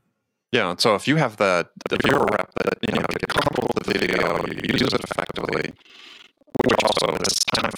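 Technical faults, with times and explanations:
1.81 s to 7.77 s, buffer tearing: right after "if you have that" a rattly, robotic buzz at about 21.5 Hz sets in and stays, which fits a 2048-sample buffer. Writer and reader have slipped, so roughly half of each buffer replays audio about a tenth of a second old, with hard joins at both edges.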